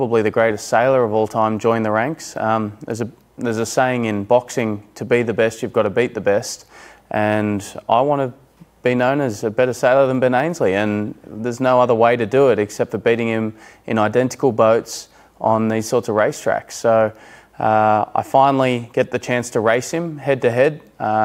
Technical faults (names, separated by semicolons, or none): none